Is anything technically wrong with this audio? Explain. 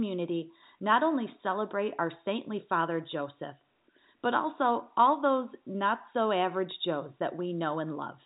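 No, this is telephone-band speech with nothing above about 3.8 kHz, the expected ceiling of G.711 telephone coding, and nothing technical is wrong with it.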